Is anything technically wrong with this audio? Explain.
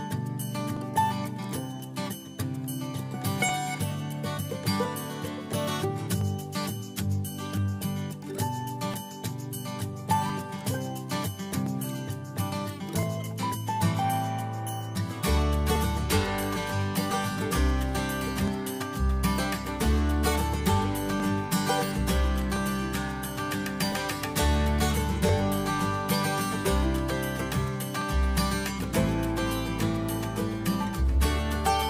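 Yes. From 0.77 s to 30.74 s a click recurs every 1.37 s, about twenty in all. These are clock drift buffer slips, likely from two devices whose clocks differ by roughly 700 ppm, so a few dozen samples are periodically dropped or repeated. Each appears as a thin vertical broadband line on a spectrogram and a waveform discontinuity.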